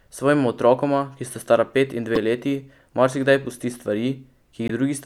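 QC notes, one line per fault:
2.15–2.17 s and 4.68–4.70 s: damaged data in a compressed stream. Two brief glitches, each under 30 ms, the first between "sta stara pet in" and "leti marsikdaj pusti stvari". Corrupt bytes derail the decoder, which loses frame sync and jumps to the next header.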